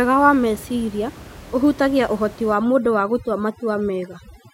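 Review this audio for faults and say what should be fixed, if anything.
Overdone noise removal sets in at 2.54 s, right after "wa meciria ũhutagia ũhoti", and lasts to the end of the clip. A noise reduction stage is clamping down too hard. Frequency bands that sit near its noise estimate are cut to almost nothing. The room noise, about 20 dB below the speech, collapses into near silence with twinkling specks. Quieter parts of the speech are removed along with it. To prevent this, lower the reduction amount so the background is attenuated rather than erased.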